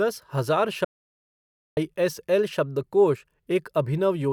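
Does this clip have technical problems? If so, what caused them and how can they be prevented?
Yes. An audio dropout to silence runs from 0.85 s to 1.77 s, removing about 0.92 s of the speech. The sound cuts off abruptly mid-flow and resumes just as suddenly, and the gap in between is dead silence with no room tone at all, so whatever was spoken there is lost. The likely cause is that the input signal briefly disappeared, through a loose connection, a dropped wireless or USB link, or an accidental mute, while the recorder kept writing silence. To prevent it, secure cables and connectors, monitor input levels during recording, and keep a backup recorder running.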